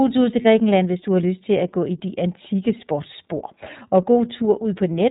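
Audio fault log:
throughout: iLBC codec. Nothing reaches above 4 kHz, so on a spectrogram the energy stops at a flat ceiling with empty space above it. The sound is clear but has a rough, slightly synthetic edge, because the codec rebuilds each frame's excitation on its own. That roughness sounds plainly damaged, and the texture fits the 13.33 kbps mode with 30 ms frames. On the waveform, the fine detail looks smoothed.
0.41–0.46 s: lost iLBC frames. Right after "tur til", a gap of about 30 ms, which points to a single lost frame, is filled by the decoder repeating the last pitch cycle mixed with noise. It sounds like a brief held, buzzy vowel. On a spectrogram, the harmonic stripes run flat with no formant movement. On the waveform, near-identical periods repeat. Because each frame decodes independently, clean speech returns at once with "hvis du har lyst".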